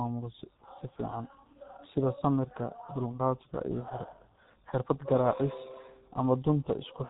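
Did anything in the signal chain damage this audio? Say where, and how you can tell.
Yes, at the codec stage: the whole speech clip carries heavy G.723.1 codec damage. Nothing sounds above 3.8 kHz, and consonants smear into a muffled, hoarse texture. That fits a 6.3 kbit/s mode, whose coarse 30 ms frames update the vocal model too slowly to track fast articulation.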